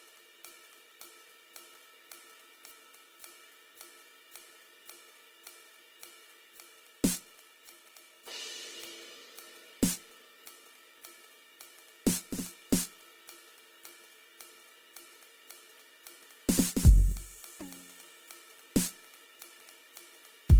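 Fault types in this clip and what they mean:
Opus compression: Throughout the music the tones come across rough, grainy and noisy, plainly so, yet the spectrum stays full, with content reaching about 20.2 kHz and few swirling holes. That separates it from MP3, whose starved bands drop out and warble. The likely cause is Opus in its music mode, keeping each band's energy and filling short-changed bands with folded or noise content, which fits a low rate of around 16 kbps.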